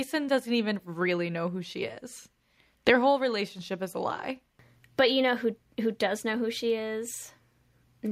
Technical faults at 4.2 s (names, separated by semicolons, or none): none